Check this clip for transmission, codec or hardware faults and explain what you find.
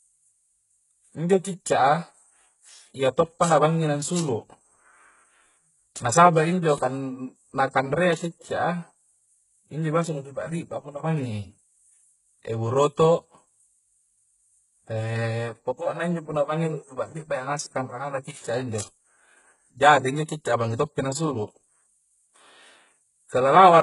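There is one fault, running through the whole speech clip: heavy HE-AAC compression. The top is still bright up to about 11.1 kHz, with nothing above, but s sounds come out gritty and metallic. That points to copied-up treble from spectral band replication, likely at around 12 kbps, rather than a plain low-pass, which would simply sound dull.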